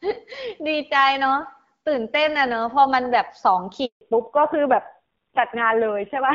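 Speech recorded over a mobile call, carried at first by the AMR wideband (HD Voice) codec, which up to 3.85 s sounds clear with only light coding roughness, consistent with a 12.65 kbit/s rate. At 3.85 s a handover gap cuts the audio: the voice fades out within a few tens of milliseconds and stays silent for 160 ms, until 4.01 s, while the call switches networks and no speech frames arrive. Whatever was said in that stretch is simply gone. On a waveform this is a flat, empty strip with a quick taper at its leading edge; on a spectrogram it is a clean vertical band of nothing across all frequencies. From 4.01 s to the end the call has made a fallback to narrowband, moving onto an older codec, which by its dull, coarse sound points to AMR-NB at around 5.9 kbit/s. Everything above 4 kHz disappears, so the voice loses its crispness and takes on a muffled, grainy character. A spectrogram shows this plainly: energy that reached up toward 7 kHz before the gap now stops at a hard horizontal ceiling at 4 kHz, with the region above left dark for the rest of the clip.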